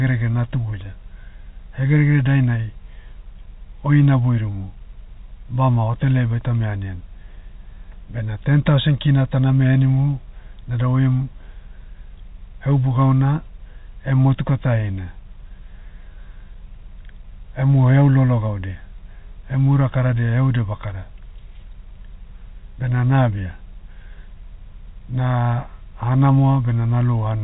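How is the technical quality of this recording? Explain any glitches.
Nothing stood out as a glitch on listening; the speech comes through as ordinary fixed-line telephone audio, with nothing above about 3.8 kHz, which is what that coding passes.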